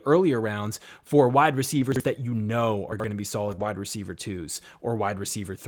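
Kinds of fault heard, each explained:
Lost packet rebuilt from error correction: packets went missing, and the decoder played the lower-bitrate copies carried in the following packets, so nothing drops out. Around 1.75–1.81 s, 3.47–3.53 s and 3.60–3.66 s the speech turns briefly rougher and noisier. Unlike concealment, real content survives.
Chunks out of order: a 40 ms chunk of speech plays late, one chunk behind at 1.92–2.00 s and two behind at 2.92–3.04 s. Nothing is lost, but the sequence jumbles with hard joins, which separates it from smeared loss or noisy rebuilt frames.
Short concealed packet loss: at 3.55–3.60 s about 20 ms never arrived, and the receiver stretched the preceding sound over the hole before blending back. It comes across as a brief smear or wobble rather than rough noise, since no copy of the lost audio existed.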